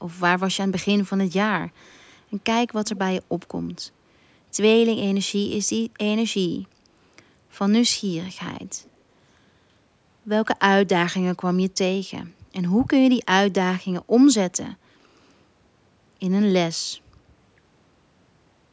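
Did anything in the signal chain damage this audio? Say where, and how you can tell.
Yes. Echo leak at the call-processing stage: short delayed copies of the speech surface at 2.86–2.99 s, roughly 20 dB down, and much fainter at 8.84–8.90 s. Both lag by 339 ms, likely residue a loudspeaker-side echo canceller failed to remove.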